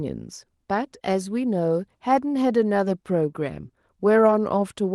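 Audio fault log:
No faults heard anywhere in this speech.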